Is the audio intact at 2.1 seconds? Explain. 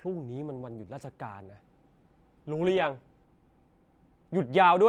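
Yes, the speech at 2.1 seconds is intact, with no dropout, click or other fault at that point.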